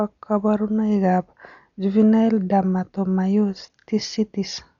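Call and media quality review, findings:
Dull, band-limited speech throughout, nothing above 6.9 kHz; rough, fluttering noise around tones. Likely Dolby Digital compression, fits about 48 kbps: bitless lines dither-filled. Spectrogram: hard ceiling at 6.9 kHz, speckled noise between harmonics.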